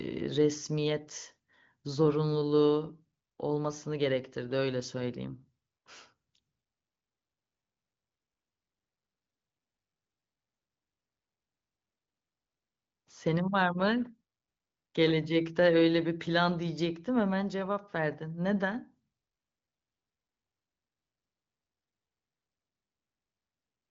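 No technical faults can be heard anywhere in this recording.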